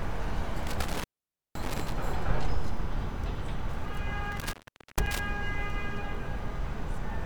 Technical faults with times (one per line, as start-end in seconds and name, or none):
0.67-1.92 intermittent contact
4.32-5.19 intermittent contact